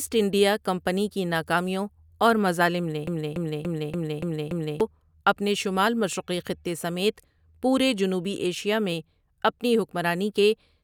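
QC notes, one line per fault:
3.07–4.81 s, broken-record loop: a 0.29 s fragment of speech repeats exactly, back to back, six times, before "اپنے شمال مشرقی خطے". The speech meant for that span is lost. Likely a stalled player or stream resending its last held fragment.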